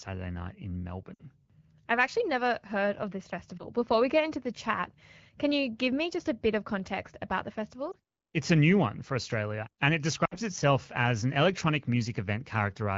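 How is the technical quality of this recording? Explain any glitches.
The recording is wideband phone-call speech, with the light coding character you'd expect from AMR wideband (HD Voice) at around 12.65 kbit/s. It has four short glitches from lost AMR speech frames.

They hit at 1.14 s (right after "night in"), 3.57 s, 7.91 s (after "of context about the") and 10.25 s (after "and it"). Radio errors corrupted frames, so the decoder patched the gaps by repeating the last good pitch and vocal tract settings at falling gain. The single-frame losses at 3.57 and 7.91 s come across as a quick dip or warble. At 1.14 and 10.25 s about 60 ms is lost, which fits three dropped 20 ms frames, and the sound drops to near silence within two frames before speech comes back a bit rough.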